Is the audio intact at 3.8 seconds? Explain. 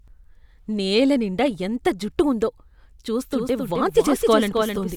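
No, a doubled audio track runs from 3.32 s to the end: a copy about 0.3 s late and somewhat quieter, likely from a slower capture path, repeating each syllable. Spectrograms show every pattern duplicated.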